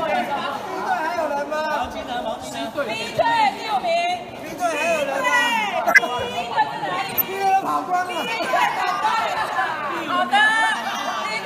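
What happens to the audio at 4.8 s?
Nothing goes wrong at 4.8 s; the audio plays through that moment intact, with no dropout, click, distortion or other disturbance.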